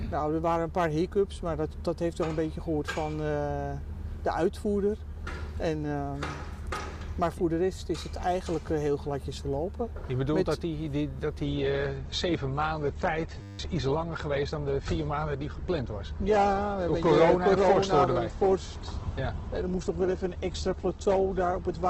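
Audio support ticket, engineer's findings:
Adaptive stream at a lower bitrate, 11.44 s to end. Abrupt switch with no gap. Treble gone above 8.2 kHz, rising codec artefacts. Consistent with the player dropping to a low-bitrate rendition, around 12 kbit/s, after throughput fell.

System hang loop, 13.42–13.59 s. Steady 100 Hz buzz: one 10 ms fragment repeated exactly, many times. Host or driver stalled while the audio hardware kept replaying the same ring-buffer segment. About 150 ms of real audio lost.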